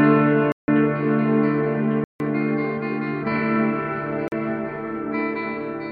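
At 0.52 to 0.68 s, 2.04 to 2.20 s and 4.28 to 4.32 s, blocks of digital silence appear. The sound cuts abruptly to silence and returns. The 160 ms gaps sound like holes, the 40 ms one like a shorter hole.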